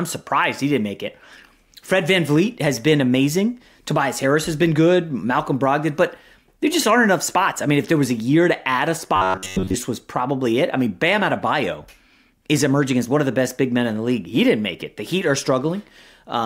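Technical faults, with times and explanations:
9.16–9.75 s, robotic sound from repeated short buffers: speech becomes a rigid metallic buzz at 93.8 Hz, likely from an 11 ms buffer being repeated through most of it.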